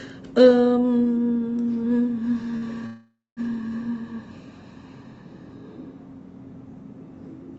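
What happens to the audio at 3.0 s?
A call audio freeze runs from 2.86 to 3.40 s. The sound stalls into a fading buzz, then 0.21 s of silence. It likely comes from delayed packets draining the jitter buffer. Nothing is lost; the audio resumes about 0.51 s late.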